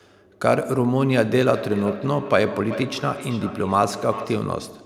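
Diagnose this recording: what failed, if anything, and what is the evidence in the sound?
From 1.54 s to 4.6 s the speech returns roughly every 0.4 s, thin and ringing, peaking about 12 dB below the original. This is feedback echo between two devices in call processing: a nearby device replays this microphone's signal, which is recaptured, and the local echo canceller ignores it.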